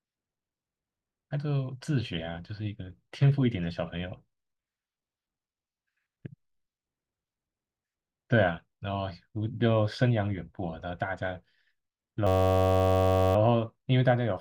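From 12.27 to 13.36 s the speech gives way to a system hang loop: the host stalled while the audio hardware kept replaying one 10.67 ms slice of its ring buffer, which fits a 512-sample buffer. It repeats about a hundred times, producing a steady buzz near 94 Hz.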